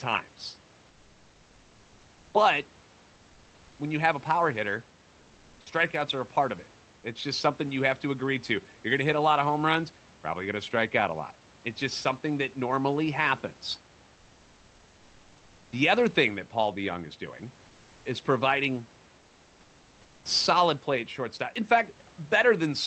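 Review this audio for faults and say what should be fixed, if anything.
Comfort noise in place of the background, from 5.20 to 5.66 s (460 ms) and from 19.20 to 20.25 s (1.05 s): the sender likely stopped transmitting during these pauses under Opus discontinuous transmission, so the receiver filled them with synthetic noise. The real room background, sitting about 31 to 34 dB below the loud speech, is replaced by a flat, featureless hiss, about 1 dB quieter in the first gap and about 4 dB quieter in the second. Turning DTX off, or tuning the comfort-noise level and spectrum to match the actual room, would prevent this.

Onset clipped by the voice detector, at 5.64 s: the voice detector likely reacted late when sound resumed after the first gap, so about 20 ms of the start was never sent and comfort noise played in its place. The speech therefore begins abruptly, without its soft lead-in. 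Adding hangover and look-ahead to the voice detector, or disabling DTX, would stop it.

Hard clipping, at 18.44 s and 22.49 s: a gain stage let peaks reach the converter's limit, driven about 0 dB over, so the tops of the waveform were cut flat. The flattened peaks add high harmonics, heard as a brief crackle on the peaks. Lowering the input gain or placing a limiter before the converter would prevent it.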